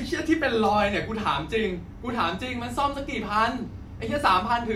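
Nothing in the speech stood out as a technical problem on listening.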